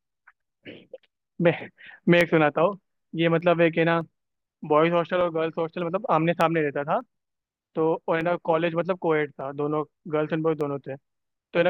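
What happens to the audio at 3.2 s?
At 3.2 s the speech sits inside a run of short, regular clicks that repeat every 0.6 s from 0.41 s to 11.2 s, about twenty in all. These are clock drift buffer slips, likely from two devices running on separate clocks roughly 500 ppm apart, so the buffer between them drifts until a small block of samples, around fifteen, is dropped or repeated. The strict, even spacing sets them apart from random dropouts or packet-loss glitches.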